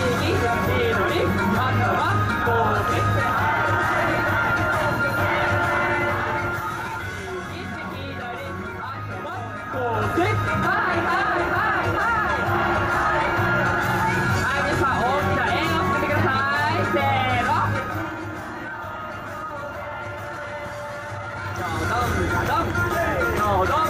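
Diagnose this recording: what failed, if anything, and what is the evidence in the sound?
A ticking, zipping texture rides on the sound from 9.57 to 10.12 s as the level changes by roughly 10 dB. This is zipper noise: the gain moves in unsmoothed 2 dB steps, around ten per second, each step a small click, likely applied once per buffer in the processing stage.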